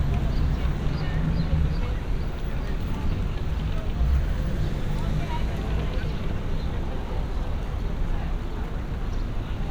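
No technical faults can be heard anywhere in this audio.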